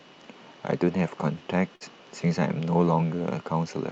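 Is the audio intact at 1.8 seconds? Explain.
No. From 1.75 to 1.83 s there is a burst of packet loss. About 51 ms is filled by stretching the preceding speech and fading it, then the audio resumes with roughly 60 ms missing. Unlike a clean dropout to silence, the gap is a held, decaying tail followed by a skip.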